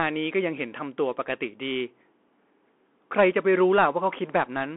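Speech, heard through a Bluetooth CVSD headset codec for the whole clip. The band runs from about 250 Hz to 3.4 kHz, with nothing above 3.8 kHz. One-bit up-or-down coding, fitting a 64 kbps link, lags sharp changes. S sounds turn scratchy over a granular hiss.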